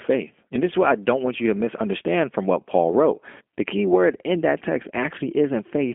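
Throughout, G.729 codec damage: speech rebuilt from a filter and sparse pulses sounds rough and synthetic, unlike plain band-limiting. It is confined to 250 Hz–3.4 kHz, nothing above 3.6 kHz, which fits an 8 kbit/s codec.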